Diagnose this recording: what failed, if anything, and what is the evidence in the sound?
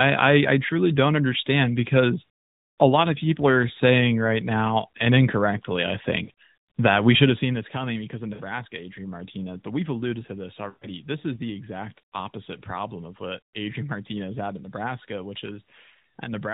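Lost AMR speech frames on the radio link. The speech stalls at 6.24 to 6.30 s, 8.34 to 8.42 s and 10.70 to 10.88 s, lasting 40, 60 and 120 ms. The decoder repeats the last good pitch and vocal-tract settings while fading the gain, so the longest gap smears toward silence. These gaps fit runs of two, three and six 20 ms frames. The narrowband sound cuts off at 4 kHz.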